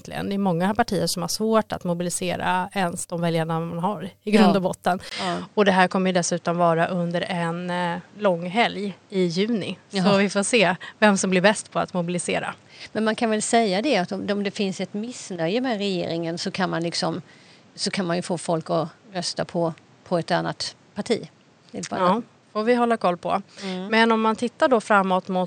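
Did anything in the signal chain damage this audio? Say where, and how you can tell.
Yes. At 5.09 s the speech breaks for about 20 ms, then comes back duller and boxier until the end. From there nothing is left above 8.9 kHz. A new background noise sits about 30 dB below the speech, but the overall level barely moves. That pattern points to the input stage. The likely cause is an input switched to a poorer device mid-recording. The gap is the handover, and the narrower band and fresh noise belong to the new device.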